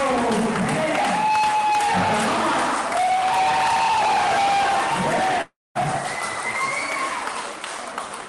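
At about 5.41 s the sound breaks off, and what fills the gap until roughly 5.77 s is a smeared continuation of the last bit of audio, a buzzy, hissy tail that fades away. Around 210 ms of that stretch is plain silence. When the audio resumes, about 340 ms of material is simply gone. That pattern points to a long network dropout as the likely cause, with the receiver stretching out what it last had until packets started arriving again.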